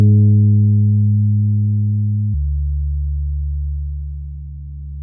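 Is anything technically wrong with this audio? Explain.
Yes. From 2.34 s to the end, a wrong sample rate slows playback to 0.69 times speed, which fits 32 kHz audio played at 22 kHz, dropping the sound about 6.5 semitones lower and slower.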